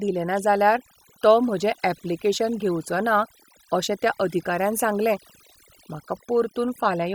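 From start to finish, the speech carries the marks of overdone noise removal. The noise reduction was set too aggressively, so any frequency band sitting close to its noise estimate is pulled far down or switched off entirely. Low-level parts of the voice fall below that threshold and vanish along with the noise. Between phrases the background collapses to near silence scattered with twinkling specks.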